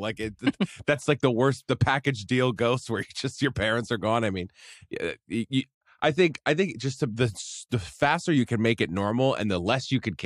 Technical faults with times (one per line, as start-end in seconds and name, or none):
none